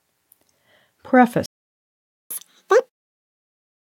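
A playback stall begins at 1.46 s and lasts until 2.31 s, a gap of about 0.85 s. The sound cuts off mid-flow into silence, with nothing bridging the hole, and then resumes. The likely cause is the player's buffer running dry, or its audio thread being held up, so no samples reached the output for almost a second before it recovered.

Catch-up at higher speed follows immediately, from 2.31 s to 3.15 s. To regain the lost time, the player resamples its backlog at twice normal speed, so everything rushes by and jumps upward in pitch by roughly ten semitones, giving a squeaky, chipmunk-like quality. The smooth fade-out, running from 2.9 s to around 3.0 s, falls inside this sped-up stretch, so the accelerated sound is already dying away as the catch-up ends.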